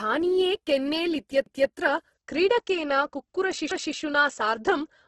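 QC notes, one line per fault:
throughout: Opus compression. Speech sounds heavily grainy and rough, with nothing above 12.1 kHz; likely Opus CELT mode near 12 kbps filling starved bands with noise.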